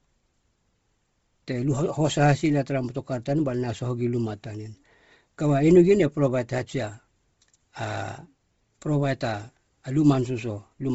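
Bluetooth LC3 compression throughout: the speech has nothing above 7.7 kHz and a breathy, grainy edge, likely from heavy low-bitrate coding near 24 kbps.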